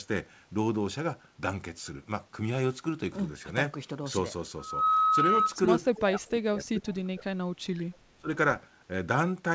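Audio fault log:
4.58–5.56 s, loudspeaker feedback squeal: a steady 1.3 kHz tone swells over about 0.3 s to roughly 5 dB above the speech, as the mic-to-speaker loop gain exceeds one.
5.94–6.02 s, echo leak: a brief, quieter copy of the speech returns about 289 ms late, roughly 15 dB down, likely residual echo the far end's canceller missed.
6.07–7.91 s and 8.18–8.29 s, speech suppressed in double talk: the speech dips and breaks up, by as much as 25 dB, likely the echo canceller turning down both its own talker and the loudspeaker echo during overlap.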